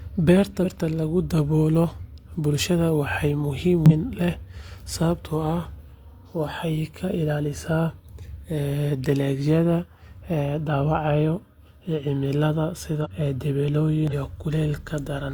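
Damaged data in a compressed stream occurs four times in this speech: at 0.61 to 0.66 s, 3.86 to 3.92 s, 13.01 to 13.07 s and 14.08 to 14.13 s. In each burst, lasting roughly 50 to 60 ms, corrupted bytes make the decoder misread or reject the affected frames. It loses synchronisation and hunts for the next valid frame header, and the garbled output comes through as a brief chirp or squawk.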